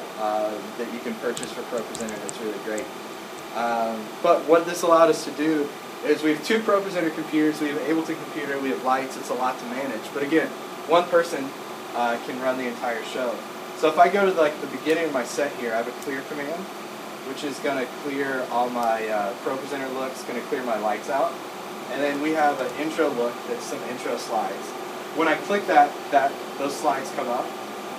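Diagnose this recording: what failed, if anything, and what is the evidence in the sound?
The failure is in the analogue wiring. Timecode bleed runs through the whole recording, from start to finish. A steady chirping warble sits behind the sound. It flips between two pitches around 1 and 2 kHz. It stays roughly 20 dB below the wanted signal. The pattern repeats at 30 frames per second. That rhythm points to linear timecode. A square-wave code on a neighbouring track or cable has coupled into this channel, and it is being recorded along with the audio.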